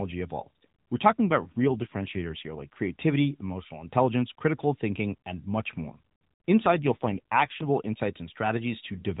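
AMR rate drop at 1.26–2.80 s and 6.66–7.69 s: this narrowband speech turns rougher and more synthetic without any gap, which fits the codec stepping down from 12.2 to 5.9 kbps.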